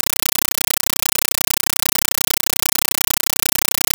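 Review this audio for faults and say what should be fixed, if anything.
Throughout, the speech is replaced by loud, chattering static. This is a compressed stream played as audio. Each 8 ms noise burst is one undecoded AC-3 frame, repeating 31.25 times a second with zero padding between. Set the receiver to decode AC-3, or send PCM.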